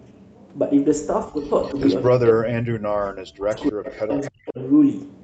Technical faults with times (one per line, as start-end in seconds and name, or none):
1.26-1.77 speech suppressed in double talk
1.64-2.08 echo leak
2.12-4.59 speech suppressed in double talk
3.56-4.31 echo leak